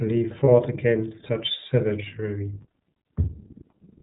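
It's a speech clip run through the iLBC codec the whole way, and the damage is plainly audible. Nothing above 4 kHz survives, so it sounds narrow and a bit rough and synthetic, which fits the 13.33 kbps mode with its 30 ms frames. Around 0.44 to 0.49 s there are lost iLBC frames, most likely a single dropped packet. The decoder fills the gap by repeating the last pitch cycle with some noise mixed in, so you hear a brief buzzy, held vowel. Because each iLBC frame decodes on its own, the voice snaps back right after.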